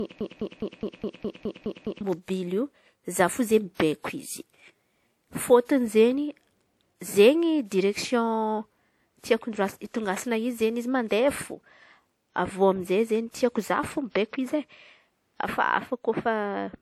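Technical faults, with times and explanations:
Throughout: low-bitrate audio saved at a high bitrate. The coarse, smeared artefacts likely left by an earlier encoder around 64 kbit/s remain, and the high-bitrate MP3 wrapper adds no clarity, unlike ordinary single-pass compression.
0.00–2.01 s: broken-record loop. A 207.5 ms fragment, already repeating when the clip begins, plays nine times back to back, likely a stall resending its last buffer. It is exact repetition, not an echo.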